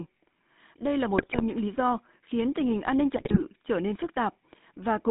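The whole clip carries the GSM full-rate codec: buzzy, gravelly speech confined to roughly 150 Hz to 3.7 kHz, with a hard spectrogram ceiling, consistent with 13 kbps coding. GSM bit errors then corrupt decoded frames from 1.18 to 1.42 s, before "những lý do khiến", and 3.16 to 3.43 s, between "tình hình an ninh" and "trở nên". They produce squawks and gargling, with waveform level spikes and smeared spectral blotches.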